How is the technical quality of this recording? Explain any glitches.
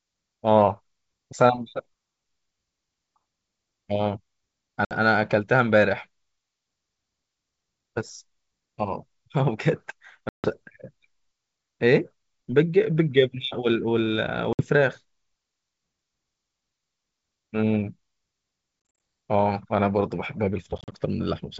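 The recording suffers from packet loss on an ADPCM call, with five breaks in the speech at 4.85–4.93 s (60 ms lost), 10.29–10.51 s (150 ms), 14.53–14.61 s (60 ms), 18.89–18.99 s (130 ms scattered over 200 ms, no run longer than 40 ms) and 20.78–20.95 s (80 ms scattered over 140 ms, runs up to 40 ms). The wideband G.722 path itself carries the speech clearly up to about 7 kHz, which suggests the full-rate mode.

In each case, missing packets are replaced by silence, so the sound cuts off with a hard edge. Because the decoder's adaptive predictor and step size lose track of the sender's, the speech comes back slightly distorted, at times with a click or at the wrong level, then settles within some tens of milliseconds. That disturbed recovery after the gap is what separates this from a plain dropout, which would resume cleanly. The last two events sound like a stutter of short holes, not one gap.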